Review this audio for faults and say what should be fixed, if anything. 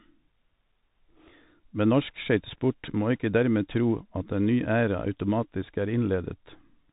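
The whole clip went through a Bluetooth CVSD headset codec, whose one-bit slope coding fits a 64 kbps link. It cuts everything above 3.8 kHz and leaves s sounds scratchy over granular hiss. Record with a wired microphone or a wideband Bluetooth profile so the speech never passes through CVSD.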